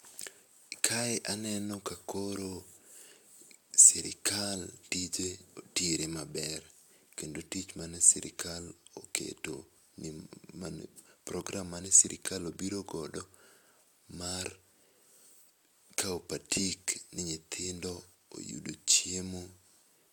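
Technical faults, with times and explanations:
No technical faults are audible.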